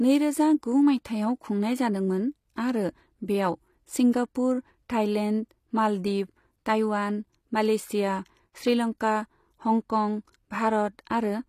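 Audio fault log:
Throughout, HE-AAC compression: the treble stays bright but sounds false across the whole speech clip, with s sounds turning gritty and lispy and the upper range taking on a metallic sheen. The likely cause is HE-AAC coding, which keeps only the lower spectrum and rebuilds the top by copying lower bands upward under a coarse envelope, so the upper harmonics no longer line up with the lower ones. The degree of damage fits a low bitrate around 24 kbps.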